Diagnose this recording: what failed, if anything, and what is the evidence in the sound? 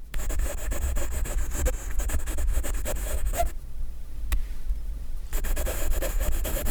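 From 1.33 s to 2.02 s the sound slows by about 5.3% and drops roughly 94 cents, close to a semitone, with speed and pitch falling together before snapping back to normal. This is likely a drift correction step at the driver or buffer stage: a clock-matching resampler changed the playback rate in one jump to rebalance its buffer, then released it, instead of adjusting gradually and inaudibly.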